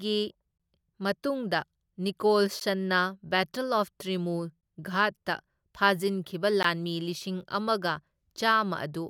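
At 0.58, 2.6, 4.61 and 6.63 s the speech drops into short 16 to 20 ms silences, a gap at a join of encoded pieces every 2 s where untrimmed encoder padding was left in.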